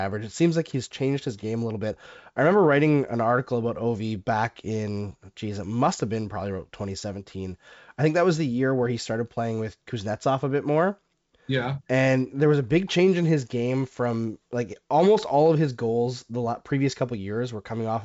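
Nothing's wrong with this speech clip; it simply carries the character of G.722 wideband telephone coding at 64 kbit/s, with the audio topping out around 7.7 kHz as that path does.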